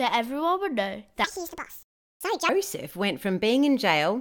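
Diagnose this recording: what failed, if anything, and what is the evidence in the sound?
A section at the wrong speed runs from 1.24 to 2.49 s, just after "everyone would know". The speech plays 1.72 times fast, rising roughly ten semitones. The likely stage is a playback or editing clock mismatch. A spectrogram shows harmonics jumping upward and syllables squeezed shorter.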